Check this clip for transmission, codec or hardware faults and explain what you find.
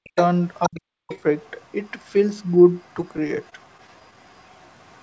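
Three kinds of fault show up: two double-talk dropouts, a faint leak of a second voice, and a stuttering stretch. The audio stops at 8 kHz, which fits a G.722 call path at 64 kbps.

Speech suppressed in double talk, from 0.0 to 0.16 s and from 0.68 to 1.13 s: the speech sinks by up to about 40 dB, likely because the echo canceller muted both sides during overlap.

Other side's voice leaking through, from 0.16 s to the end: a faint second voice sits about 35 dB under the speech, likely loudspeaker echo the canceller left in the microphone signal.

Repeated stalls (stutter), from 3.02 to 4.14 s: nine brief holds, none longer than 18 ms, make the speech drag slightly. The jitter buffer kept running dry and stretched the last sound, filling 98 ms with nothing lost.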